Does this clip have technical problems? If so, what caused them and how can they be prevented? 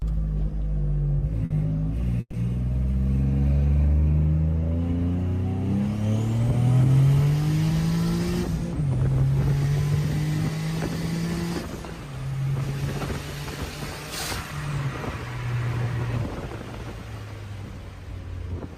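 Yes. From 1.45 to 1.52 s there is a short stall from a late packet. One sound is held about 50 ms too long with a faint buzz, because the jitter buffer ran empty and the receiver stretched the last audio until the packet arrived. A larger or adaptive jitter buffer would absorb delays like this.

From 2.20 to 2.35 s there is a call audio freeze. The sound hangs as a fading buzz, drops to about 40 ms of silence, then resumes where it stopped, adding 130 ms. The likely cause is packets held up in transit, which drained the buffer. Prioritising voice traffic with QoS on the network would reduce these holdups.

From 13.36 to 15.19 s there is a jitter buffer speed-up. The sound runs about 6% fast at unchanged pitch and feels hurried, as the receiver trimmed pitch-period slices totalling about a tenth of a second to shed excess buffered delay. Smoother packet delivery, or gentler buffer-shrinking settings, would prevent this.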